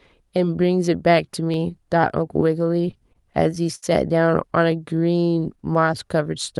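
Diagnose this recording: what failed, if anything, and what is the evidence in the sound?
Network jitter-buffer underruns cause repeated stalls (stutter) from 2.71 to 3.84 s. Nine brief holds, longest 71 ms, stretch the last sound while late packets arrive.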